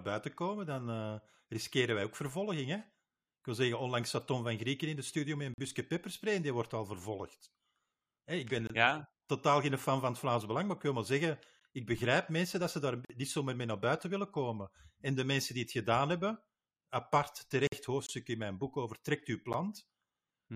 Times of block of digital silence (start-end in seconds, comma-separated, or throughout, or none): 8.67-8.70, 13.05-13.10, 18.07-18.09, 19.53